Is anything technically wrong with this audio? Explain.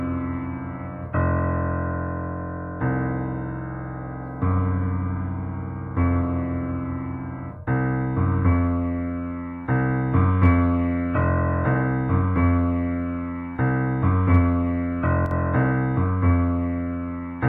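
Yes. From 15.26 to 15.31 s the sound briefly drops by about 6 dB. This is likely one channel dropping out, halving the shared content in the mono sum.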